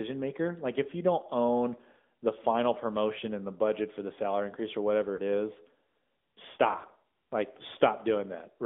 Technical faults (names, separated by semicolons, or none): AMR narrowband mobile codec; lost AMR speech frames